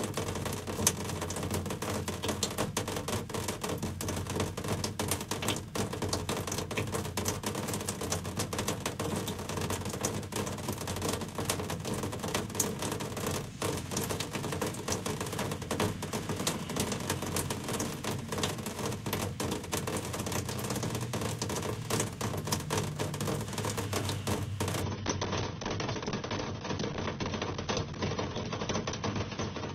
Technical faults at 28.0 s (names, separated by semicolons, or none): adaptive stream at a lower bitrate